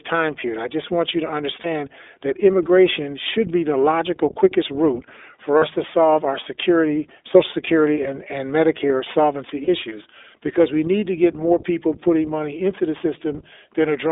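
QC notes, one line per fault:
Throughout: sample clock jitter. Timing wobble of a couple of microseconds adds hiss around 30 dB below the signal; the spectrogram shows broadband haze strongest on loud, bright passages, and none in pauses.
Throughout: iLBC codec. Speech is confined to 300 Hz–3.6 kHz and sounds rough and synthetic, consistent with 15.2 kbps, 20 ms frames; the spectrogram shows hard band edges and smeared harmonics.
1.62–1.66 s, 5.58–5.63 s, 9.64–9.69 s: lost iLBC frames. The decoder bridges gaps with a repeated buzzy pitch cycle. The first lasts 20 ms, between "just want you to" and "that immigration should be". The others last 40 ms, before "to solve our security" and "issues because we need". The waveform shows periodic repeats.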